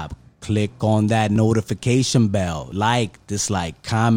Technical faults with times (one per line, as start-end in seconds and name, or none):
1.36 dropped buffer (overrun)
2.72 dropped buffer (overrun)
3.48 dropped buffer (overrun)